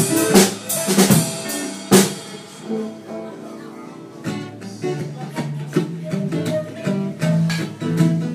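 No technical faults can be heard anywhere in this audio. Nothing in it calls for a time mark or further comment.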